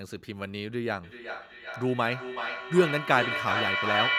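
Speech that, from 1.03 s to the end at 4.19 s, keeps coming back roughly every 0.4 s, the repeats thin and ringing and reaching about -1 dB relative to the speech. This is feedback echo between two devices: one plays the other's microphone feed, which is recaptured beyond either echo canceller's reach.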